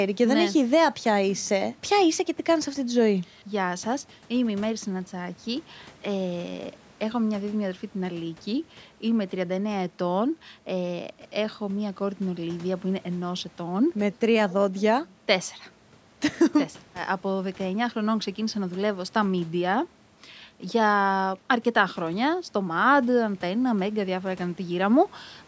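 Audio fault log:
The speech has passed through a call's microphone processing, which trims the deepest bass and leaves nothing above 8 kHz, and nothing in the signal departs from that normal path.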